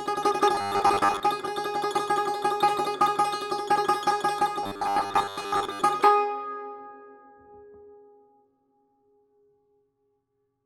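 Robotic sound from repeated short buffers affects this music clip from 0.55 to 1.23 s and from 4.63 to 5.84 s, with a rigid 100 Hz buzz. The likely cause is a starved stream replaying a 10 ms block, covering about half, then most, of the audio.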